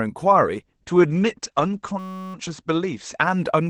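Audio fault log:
0.63 s to end, call bitrate drop: encoding turns coarse and muffled as the band narrows from 12 kHz to 8 kHz, consistent with a drop to about 10 kbps.
1.99–2.34 s, system hang loop: a 5.33 ms fragment repeats, producing a steady 188 Hz buzz while the system stalls, which fits a 256-sample buffer.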